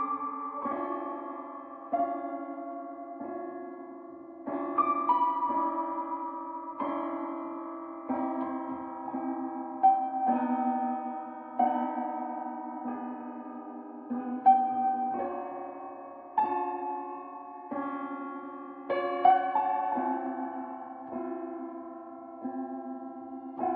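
Nothing in the sound here stands out as a technical fault at any point, so there's nothing to pin to a timestamp.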